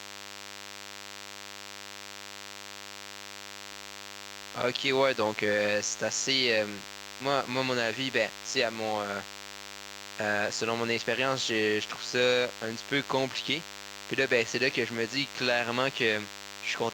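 Running under the whole of this speech recording is DECT cordless phone buzz: a thin, steady 100 Hz rasp full of harmonics, sitting roughly 15 dB below the voice. A nearby DECT handset or base fires a radio burst every 10 ms, and the audio circuitry rectifies it into the signal.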